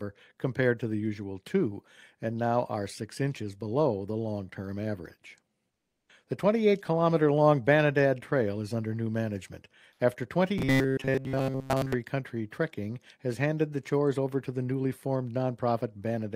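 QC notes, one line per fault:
5.71–6.07 s: comfort noise in place of the background. For 360 ms the real background gives way to a steady, featureless hiss, about 2 dB quieter. The background sits about 58 dB below the loud parts. Likely discontinuous transmission, with the receiver filling the pause with synthetic noise.
10.58–11.94 s: robotic sound from repeated short buffers. The sound turns into a rigid, metallic buzz at 133 Hz. This fits repeating a buffer of about 7.5 ms, with most of the real audio skipped. Likely late-arriving audio forcing the software to repeat its last buffer.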